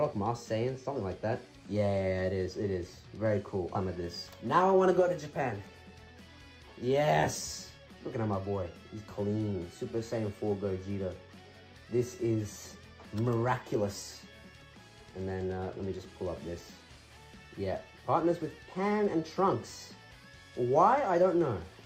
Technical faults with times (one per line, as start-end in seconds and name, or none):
3.75-3.79 stream segment skipped